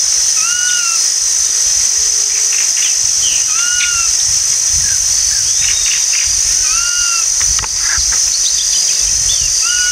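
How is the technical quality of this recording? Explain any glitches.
The technical quality of this recording is sound, with no glitches to explain.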